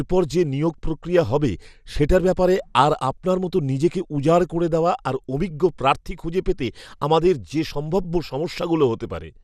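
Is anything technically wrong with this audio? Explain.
Yes, there's MP2 compression damage running through the whole speech clip. It sounds dull up top, with a gurgling, grainy texture. That's likely MPEG Layer II coding at a low bitrate, something like 80 kbps. The codec divides the signal into 32 sub-bands and shares out bits among them. Here it runs short, so upper bands drop out and flicker back, and the bands it keeps get coarsely quantised. You'd know it from weak digital radio.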